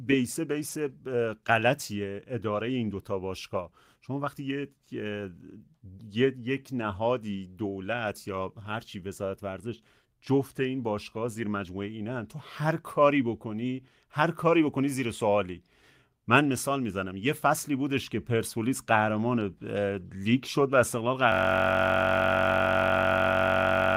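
At 0.69 to 0.79 s, and again at 20.77 to 20.79 s, the speech turns briefly rough and noisy without any gap. Each is a lost packet rebuilt from error correction. The first fits about three lost packets, the second one. The decoder played the low-bitrate copies carried in the following packets, so the sound never drops out.

From 21.32 s to the end, a system hang loop replaces the speech with a steady buzz at about 46.9 Hz. The same 21.33 ms slice repeats exactly, which fits a 1024-sample buffer at 48 kHz, while the hardware cycled its ring buffer. The loop is too short to sound like a stutter.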